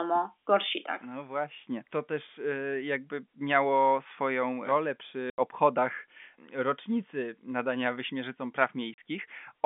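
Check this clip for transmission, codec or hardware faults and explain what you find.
Two dropouts from packet loss filled with silence break up the speech, carried over G.711 telephone coding with its narrow line band. At 5.30 s, after "jakby miało swoją rolę", an 80 ms hole appears. At 8.94 s, after "obchodach rocznicy nadania wyśmierzycom", a 40 ms hole appears. Lost packets became silence. The gap lengths fit 20 ms packets. Each hole cuts in abruptly.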